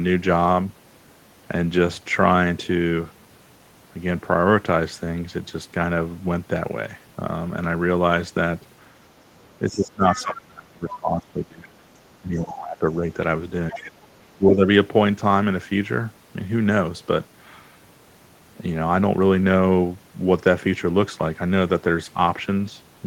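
A speech recording with two echo-canceller faults clustered between 9.69 and 14.62 s. Speech suppressed in double talk appears as the talker's level dipping by up to about 25 dB from 9.69 to 11.81 s, 12.17 to 13.05 s, 13.72 to 14.06 s and 14.36 to 14.62 s. This is likely the canceller attenuating everything while both ends speak. The other side's voice leaking through appears as short scraps about 15 dB below the speech at 10.16 to 10.36 s, 10.88 to 10.94 s, 12.37 to 12.53 s and 13.72 to 13.91 s. This is likely residual loudspeaker echo that the canceller failed to remove from the microphone signal.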